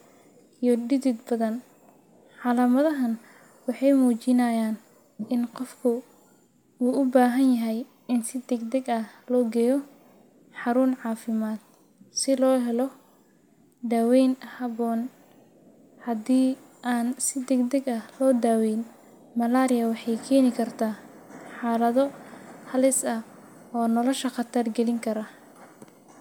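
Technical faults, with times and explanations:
Nothing to flag here, as there's no technical fault to point to anywhere in this stretch of speech.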